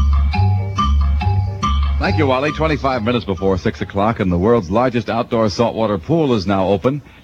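No technical fault can be heard anywhere in the audio, with the signal holding steady and intact throughout.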